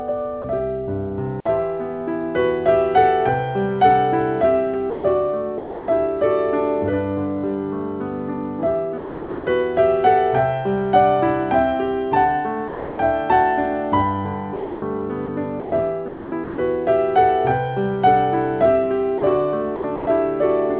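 The sound gives way to steady, flat noise at 0.42 s, and again at 4.9 to 5.04 s, 5.58 to 5.88 s, 8.98 to 9.46 s, 12.68 to 12.98 s and 19.18 to 19.22 s. The gaps run from 20 ms to about half a second. Each is likely sound dropped by the voice detector, with comfort noise played in its place. From 14.56 to 16.58 s and from 19.76 to 20.06 s, the sound turns choppy. This is likely sound chopped by the voice detector, switching on and off repeatedly. About 0.8 s is lost in the first stretch and about 0.2 s in the second. Nothing is heard above 4 kHz, which fits a narrowband telephone codec such as G.711.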